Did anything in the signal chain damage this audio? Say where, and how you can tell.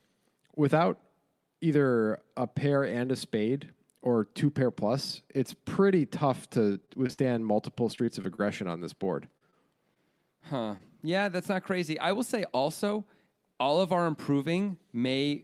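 Yes, at the network stage. Repeated packet loss (robotic sound) runs from 6.65 to 8.40 s, after "plus it's pretty tough", with 14 gaps up to 39 ms, and again from 9.04 to 9.97 s, after "on this", with 4 gaps. Each hole is patched by extending the previous sound, so the speech turns choppy, with pieces actually missing.

A short stall from a late packet follows at 10.77 to 10.82 s. The jitter buffer ran dry, and the receiver held the last sound for about 21 ms until the packet arrived. Unlike the loss stretches, nothing is missing: a single sound is stretched once, then continues from the same place.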